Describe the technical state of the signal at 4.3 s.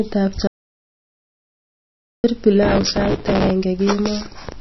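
At 4.3 s the speech sounds dull and watery, with a swirly, unstable texture, and there is nothing above 5.8 kHz. This persists through the whole clip. It is likely MP3 compression at a low bitrate, roughly in line with 24 kbps. Short of bits, the encoder has cut the treble at a fixed point and dropped weaker frequency lines, which flicker in and out between frames and leave the plainly audible, swirling damage heard here.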